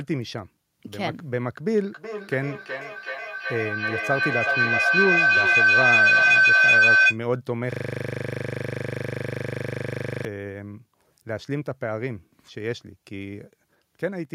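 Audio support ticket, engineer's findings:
Feedback howl, 1.87–7.22 s. Tone builds to about 10 dB over speech, centred near 1.5 kHz, pulsing roughly every 400 ms. Probable component: two endpoints sharing one room. Mic-to-speaker loop gains level each pass. Spectrogram: bright narrow horizontal band near 1.5 kHz, striped at the pulse rate. Waveform: rising, swelling envelope.

System hang loop, 7.72–10.25 s. One 40 ms slice repeats 63 times, giving a steady 25 Hz buzz. Probable component: host or audio driver freeze while hardware keeps replaying its ring buffer. Spectrogram: vertical comb of identical columns every 40 ms. Waveform: exactly repeating segment.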